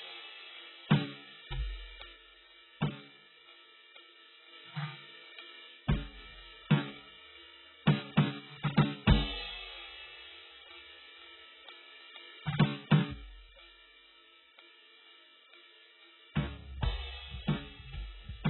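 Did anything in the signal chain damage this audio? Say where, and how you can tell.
Yes. At the codec stage, the music was likely coded with AAC-LC at a very low bitrate, probably around 8 kbps. Nothing is left above 4 kHz, so the music sounds dull and smeared throughout, as the hearing-model quantiser discarded detail to meet the bitrate.

Likely on the playback or interface side, one channel drops out at 2.13 to 4.53 s, 5.74 to 6.17 s, and from 13.11 s to the end. Each time the level falls abruptly by about 6 dB and the sound stays otherwise the same, as happens when a mono sum loses half of identical content.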